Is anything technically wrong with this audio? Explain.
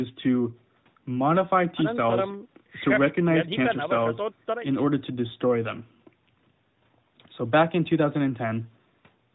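No, nothing is technically wrong with this audio.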